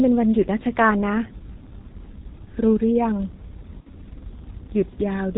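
From the start, the whole clip carries heavy G.723.1 codec damage. Nothing gets through above 4 kHz, so the speech sounds muffled and hoarse, with consonants smeared. That fits a low rate around 6.3 kbit/s and a voice model that updates too slowly.

Then at 3.80 to 3.87 s there's a dropout handled by VoIP packet loss concealment. The decoder keeps repeating its last pitch and filter at falling gain, so the speech turns into a short buzzy tone or coloured noise that fades. That's consistent with losing two 30 ms frames.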